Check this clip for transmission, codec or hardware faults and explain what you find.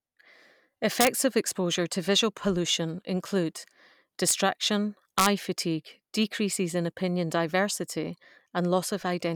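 The speech has integer overflow at 1.01 to 1.07 s, at 4.29 s, and at 5.19 to 5.26 s. Loud peaks went roughly 0 to 2 dB past the integer limit and wrapped to the opposite sign instead of being held. The result is violent cracks, much harsher than clipping's flattened buzz.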